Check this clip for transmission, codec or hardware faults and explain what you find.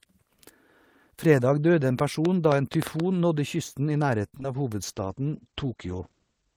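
Three faults are present in this speech clip.

From 1.99 to 3.01 s there is a train of clicks, just before "nådde kysten". About seven similar pops arrive at roughly six per second, unevenly spaced. They peak about 15 dB above the speech. The likely cause is electrical interference or a faulty connection or power supply.

From 4.28 to 4.45 s, repeated packet loss gives a robotic sound. Four gaps fall close together. The longest is 54 ms. Each hole is patched by extending the previous sound, so about half this stretch is synthetic. The result is choppy.

From 4.82 s to the end, a call bitrate drop takes the encoder from 32 to 12 kbps. It codes more coarsely and narrows the bandwidth from 20 kHz to 8 kHz. The speech turns muffled and rough for the final 1.76 s.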